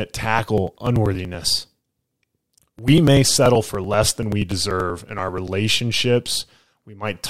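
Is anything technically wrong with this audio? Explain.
Yes. From 0.39 s to 5.48 s the speech carries a steady train of ticks, one roughly every 96 ms, about fifty in all, heard only where there is signal. This is periodic USB or driver dropouts: a recurring background task stalls the USB bus or audio driver on a fixed schedule, and each time a few milliseconds of audio are skipped outright. The splice where the sound jumps ahead produces each tick.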